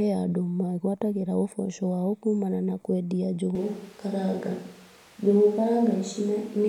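At 3.55 s, right after "kumana na kwendia", the speech abruptly turns roomy and hollow, with thinner bass, and stays that way to the end. The level holds roughly steady, with room noise about 30 dB below speech. This is likely a switch to a distant microphone.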